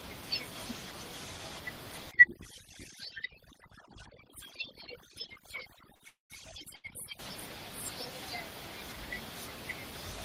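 From 2.11 to 7.19 s, overdone noise removal set the noise reduction far too strong, switching off frequency bands near its noise estimate. The room noise, about 17 dB below the speech, drops and breaks up into twinkling specks.

From 5.95 to 6.02 s, a short stall from a late packet empties the jitter buffer, so the last sound is stretched for 43 ms and then resumes where it left off, held slightly too long with a faint buzz or dip.

From 6.08 to 6.32 s, a call audio freeze, likely from packets held up in transit draining the jitter buffer, continues the last sound as a fading buzz or hiss and then 150 ms of silence. The audio picks up 221 ms late with nothing lost.

From 6.76 to 6.86 s, a second short stall from a late packet stretches the last sound by 80 ms before the audio continues, again holding it too long with a slight buzz or dip.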